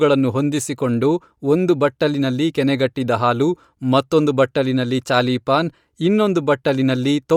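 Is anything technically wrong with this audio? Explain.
Yes. Bluetooth LC3 compression damage is plainly audible throughout the speech. The likely cause is an LC3 link whose sound fits 48 kbps and 10 ms frames. Coarse quantisation strips fine spectral detail. The voice gains a grainy edge, though content still reaches 20.2 kHz.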